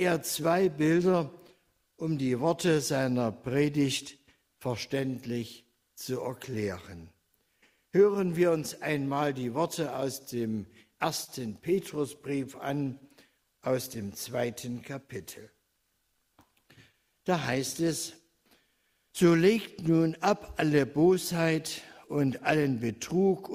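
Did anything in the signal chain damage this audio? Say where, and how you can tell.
Yes. A faint, persistent unsteadiness in timing runs through the audio, pointing to clock drift between sender and receiver: the sender's clock runs about 3% slow, so the jitter buffer keeps draining.

Slight hiccups and a dragging tempo from 0.14 to 23.5 s are repeated timing corrections. The receiver stretches by repeating short pieces, playing at 98% speed and adding about half a second overall.

Brief ticks and smears at 1.47–4.26 s, 6.05–8.34 s and 11.24–13.97 s are scattered short gaps, a few per stretch, the longest about 30 ms. Lost network packets were patched by continuing the last sound.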